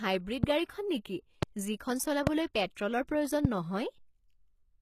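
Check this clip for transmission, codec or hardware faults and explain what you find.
There are two problems: codec damage through the whole speech clip, and four loud pops.

HE-AAC compression runs throughout and is plainly audible. The gritty, synthetic treble and lispy s sounds are likely spectral band replication copying lower bands upward, which fits about 20 kbps.

Loud pops land at 0.44–0.46, 1.43–1.45, 2.27–2.29 and 3.45–3.47 s. Each is a single sharp pop roughly 20 dB above the speech, likely a voltage spike, with the speech continuing underneath.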